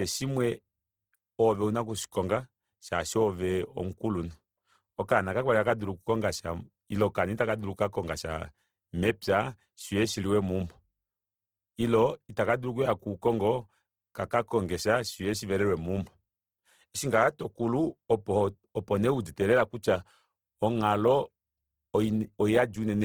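Throughout the speech, a grainy, rough texture that points to likely Opus compression at roughly 16 kbps; bands are noise-filled rather than hollowed, so it sounds gritty rather than MP3-like swirling.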